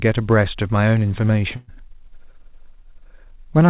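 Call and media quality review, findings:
Burst of packet loss, 1.56 to 1.69 s: about 120 ms missing, concealed by extending and fading the last sound. Jitter buffer/packet loss concealment. Narrowband G.711 path, nothing above 4 kHz.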